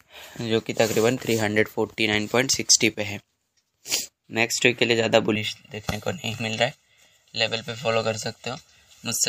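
From 5.35 s to the end at 9.28 s, channel delay (comb filtering) makes the sound hollow and phasey. One channel lags by roughly 1.5 ms before the mono sum, cutting notches from around 300 Hz upward. Unlike a flanger's sweep, these notches never move.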